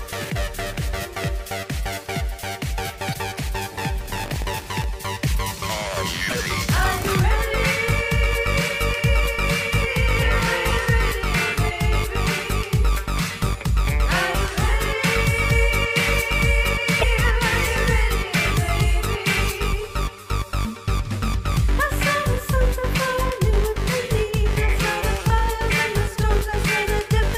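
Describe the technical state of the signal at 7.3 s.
The signal at 7.3 s is intact, with no audible fault at that point.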